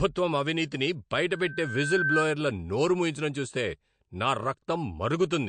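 Right from the start the speech stops dead at 9.1 kHz, with the smeared, swirly texture of a heavy MP3 encode, yet it's sitting in a much higher-rate file. That's likely low-bitrate audio saved at a high bitrate, something like a 48 kbit/s MP3 re-encoded at 192 kbit/s, where the second pass can't restore what the first threw away.

Then at 1.31 s, right after "అవినీతిని బయట", a loudspeaker feedback squeal kicks in. The mic is catching its own speaker, and a 1.6 kHz tone runs away, swelling for most of a second until it's a few dB louder than the speech. It cuts at 2.29 s, just before "నోరు మూయించడం చూస్తే నా".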